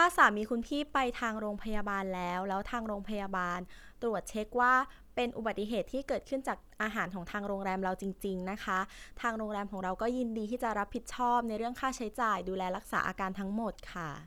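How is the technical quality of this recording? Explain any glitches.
Nothing here counts as a glitch; the recording holds steady all the way through, with no dropouts, clicks or other disturbances to point to.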